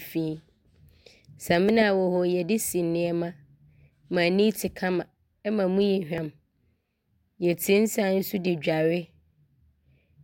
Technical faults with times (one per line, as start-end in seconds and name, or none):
1.69 dropped buffer (overrun)
6.18 dropped buffer (overrun)
8.47 dropped buffer (overrun)